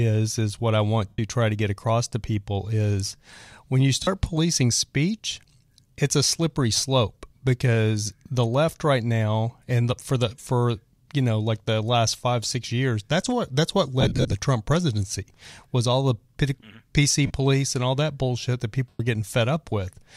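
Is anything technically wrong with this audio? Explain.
Yes. The speech has lost LE Audio frames at 1.08–1.19, 4.03–4.07, 14.01–14.33, 17.26–17.31 and 18.88–19.00 s. Around 14 s the losses are scattered, with the longest run at about 40 ms. The decoder repeats the last spectrum with random signs and fades it. The sound becomes a brief noisy smear, and the longer gaps sink toward silence.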